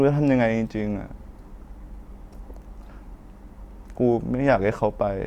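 Nothing goes wrong anywhere in this recording, so there's no technical fault to point to at any moment.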